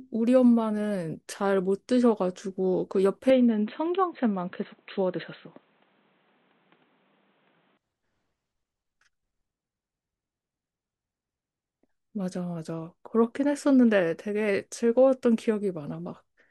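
Speech clip in which the input likely switched to a poorer device from 3.30 to 7.77 s, with no gap at either change. In that stretch nothing reaches above 4.1 kHz, so the sound turns dull and boxy, with unchanged loudness and a faint new noise floor roughly 40 dB down.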